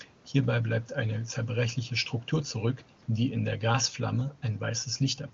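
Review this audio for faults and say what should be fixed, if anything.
No faults; nothing to fix.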